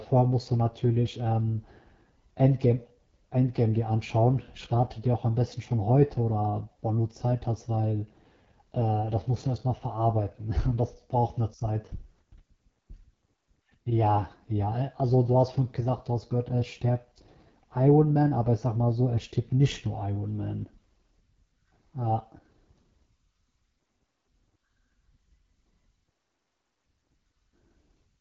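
Speech runs through the AMR wideband (HD Voice) codec for the whole clip, and the damage is plainly audible: the voice sounds rough and raspy, which fits one of the lowest AMR-WB modes, around 8.85 kbit/s. The coder models the voice as pulses through a vocal-tract filter, fakes the top band with shaped noise, and leaves nothing above 7.4 kHz. Narrowband telephone coding would stop near 3.4 kHz; this keeps the brighter wideband edge while still sounding coarse.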